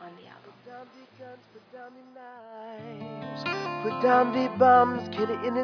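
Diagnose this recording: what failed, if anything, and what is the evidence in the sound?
Nothing in the signal chain shows a failure, and no stage leaves audible evidence of a fault anywhere in the recording.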